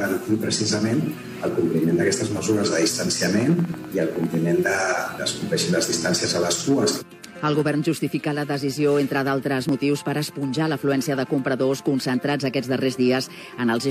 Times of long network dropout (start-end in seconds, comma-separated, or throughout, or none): none